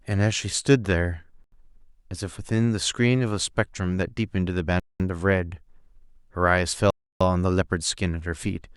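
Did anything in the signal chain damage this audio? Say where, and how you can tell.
Yes. A likely Bluetooth stall on the wireless link emptied the headphones' buffer, so the speech drops to silence at 1.44–1.52 s (81 ms), 4.80–5.00 s (203 ms) and 6.90–7.21 s (303 ms), then resumes.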